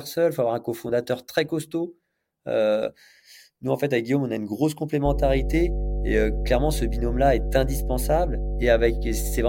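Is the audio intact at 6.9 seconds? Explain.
No, it isn't. At 6.9 s you're sitting in mains hum that kicks in at about 5.05 s, right after "on a une grosse", and carries on to the end of the clip. It's a steady low 50 Hz drone with a few low harmonics, roughly as loud as the speech itself, so it's hard to miss. Something like a ground loop or a nearby transformer is letting the power line leak into the signal path.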